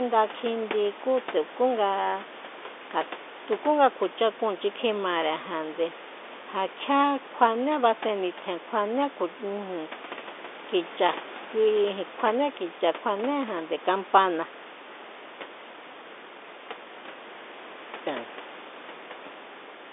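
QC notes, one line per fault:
No faults heard; room noise sits about 18 dB under the speech, and the G.711 telephone band runs from 300 Hz to 3.6 kHz as expected.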